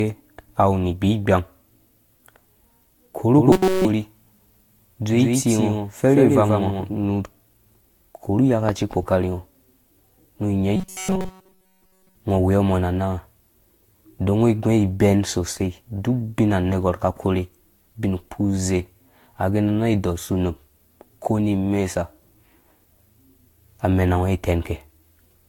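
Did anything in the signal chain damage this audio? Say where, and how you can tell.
Yes. At the codec stage the whole clip carries generation loss: the speech sounds swirly, hollow and smeared, with blurred consonant onsets, beyond what a single encode would produce. The likely cause is repeated lossy re-encoding, about four passes, with the character pointing to Vorbis at roughly 67 to 69 kbit/s. Each pass quantises on a shifted frame grid, so errors accumulate. On a spectrogram, expect flickering holes in the upper bands, a hard ceiling at 19.5 kHz, and smeared transients.

From 3.38 to 7.04 s there is a doubled audio track. A second full-band copy of the speech trails the original by about 150 ms at roughly 5 dB lower. It has no reverberant tail or room colour and switches on and off abruptly, which points away from an acoustic echo. It is likely a second, slower capture path or an edit overlap at the driver or playback stage. 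The waveform shows each syllable envelope repeated about 150 ms later at reduced amplitude, cutting in and out sharply at both boundaries.

Robotic sound from repeated short buffers occurs at 3.52 to 3.85 s and again at 10.76 to 12.15 s, right after "nu nya". The speech collapses into a rigid metallic buzz at 188 Hz that only loosely follows the syllables. That rate fits a buffer of about 5.3 ms being replayed over and over while the real audio is skipped, likely from buffer underruns in the driver. On a spectrogram this shows as flat harmonic stripes at 188 Hz multiples, and the waveform shows identical short cycles.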